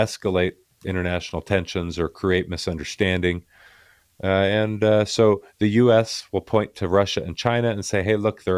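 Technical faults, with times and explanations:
No technical faults are audible; the speech signal stays intact and steady from its opening to its close.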